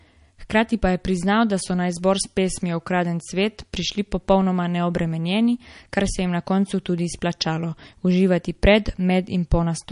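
All the way through, the speech has plainly audible damage that's likely MP3 compression, squeezed hard enough to fit a bitrate around 40 kbps. Nothing survives above 10.6 kHz, so it sounds dull up top, and the starved frequency bands flicker in and out, giving that watery swirl.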